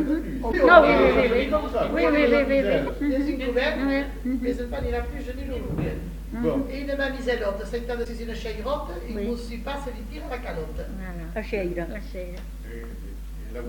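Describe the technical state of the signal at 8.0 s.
A brief blip cuts through the audio from about 8.01 to 8.06 s, lasting roughly 56 ms. This is damaged data in a compressed stream. Some of the bytes encoding that stretch are corrupt, so the decoder misreads or discards the affected frames and loses its place in the bitstream. It then scans ahead for the next valid frame header, and the garbled output produced in that gap is what surfaces as the glitch.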